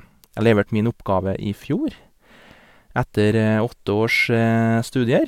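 No technical faults can be heard anywhere in this recording.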